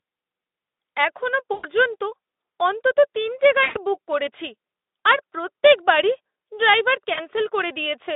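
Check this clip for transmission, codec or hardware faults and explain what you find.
Three short dropouts come from VoIP packet loss concealed by the speech codec, at 1.53–1.67 s, 3.63–3.86 s (after "অন্তত তিনটে", before "বুক করেছি") and 7.13–7.26 s (after "আর প্রত্যেক বারই ড্রাইভার"). The decoder filled each gap, about 100 ms, 120 ms and 40 ms of missing audio, consistent with runs of 20 ms frames, by repeating its last pitch and filter at falling gain. The sound smears into a buzzy tone or coloured noise that fades, and stays weak briefly after recovery. A spectrogram shows flat, stretched harmonics dimming in place, and the waveform shows a decaying, overly regular segment. The Speex narrowband link, with its 300 Hz to 3.7 kHz band, is audible around them.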